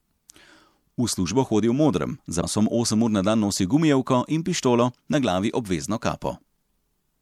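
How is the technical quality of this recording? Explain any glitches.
The recording has one glitch: a stretch of compressed frames is skipped at about 2.42 s, just after "hodi v modrem za". The speech jumps forward and drops roughly 200 ms of audio. That fits about seven lost frames of 26.1 ms each. Those frames were missing from the file or rejected by the decoder as damaged. Adjacent frames overlap, so the join is not a sharp click. It is a brief smeared blip, followed by a sudden jump ahead in the speech.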